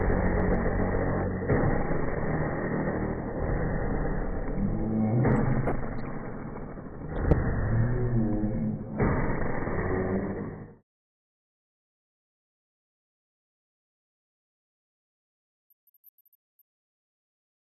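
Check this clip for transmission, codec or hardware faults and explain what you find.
There is one transmission fault, DAB burbling, heard five times: 0.97 to 1.23 s, 3.46 to 3.57 s, 5.42 to 6.08 s, 7.10 to 7.33 s and 10.05 to 10.22 s. Each burst is a burble of short noise blips over the sound. Weak reception let a fraction of a percent of bit errors through the error correction, so corrupted MP2 samples put short blips of noise in single sub-bands.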